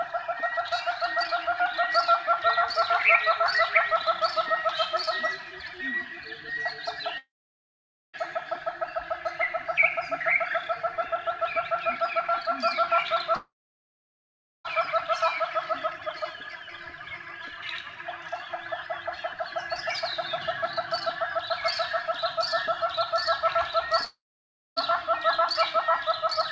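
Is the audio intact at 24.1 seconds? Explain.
No. From 24.05 to 24.78 s the audio breaks off; the last sound is stretched into a fading buzz or hiss, then about 0.6 s of silence before the audio resumes with that stretch missing. This is likely a long network dropout: packets stopped arriving and the receiver concealed the gap. On a spectrogram, the smeared, fading band gives way to a blank column, capped at 8 kHz by the G.722 call path; the waveform shows a decaying envelope flattening to a line.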